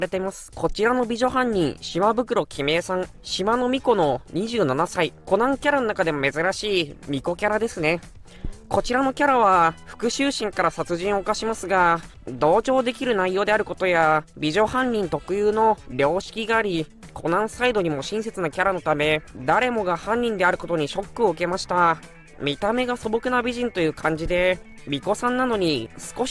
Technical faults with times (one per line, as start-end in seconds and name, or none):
none